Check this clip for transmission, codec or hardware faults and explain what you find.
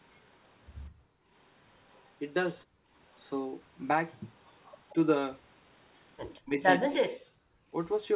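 Three echo-canceller faults appear in this speech clip, not codec or hardware faults.

Background gated by the echo canceller, at 0.9 to 1.29 s and 2.67 to 2.91 s: while the far-end loudspeaker was active, the canceller pulled the microphone down by about 30 and 31 dB, so the room tone briefly vanishes and then returns. Speech itself isn't the target here, which sets it apart from double-talk suppression.

Echo leak, at 1.91 to 2.09 s, 4.64 to 4.94 s and 6.35 to 6.4 s: a faint copy of the speech returns 184 ms after the original, roughly 30 to 35 dB down. The likely cause is the loudspeaker side's canceller failing to remove all of what its microphone picked up. The fixed delay distinguishes it from room reverberation.

Speech suppressed in double talk, from 6.41 to 7.75 s: while both sides talk, the near talker's speech dips by up to roughly 40 dB, losing well over half a second in total. 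This is likely the canceller mistaking the talker for loudspeaker echo. Unlike gating, the speech itself drops out.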